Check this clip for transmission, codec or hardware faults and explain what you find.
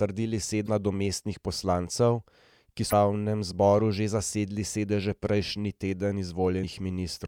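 Damaged data in a compressed stream appears three times in this speech: 0.64–0.69 s (just before "nadomestnih poslancev ki"), 2.89–2.93 s (between that phrase and "zboru že zasedli sedeže"), and 6.60–6.64 s. Corrupted bytes made the decoder misread frames and resync, leaving brief disruptions of roughly 40 ms each.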